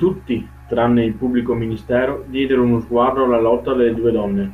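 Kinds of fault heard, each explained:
DAB burbling: At 3.95 s a brief watery blip cuts across the speech. Weak DAB reception let bit errors slip past error correction into the MP2 data, so corrupted samples put short noise blips in single sub-bands. The short, isolated event points to a low error rate. Unlike a packet-loss dropout, the sound doesn't go silent or repeat; it turns into a few watery blips confined to certain frequency bands.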